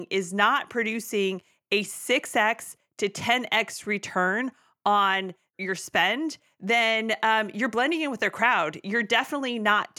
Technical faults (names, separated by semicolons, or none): none